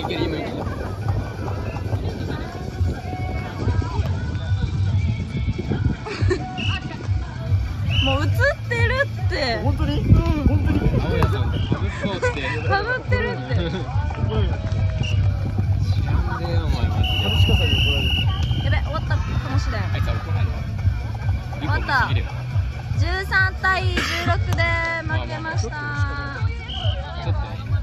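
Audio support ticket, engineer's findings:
Bluetooth SBC bit pool drop, 3.60–7.39 s, 11.59–15.29 s, 24.26–27.49 s: treble dulls and gritty noise rises, then recovers. Fits a fall from bit pool 31 to 12 (about 88 kbps); the grit separates it from plain low-pass filtering.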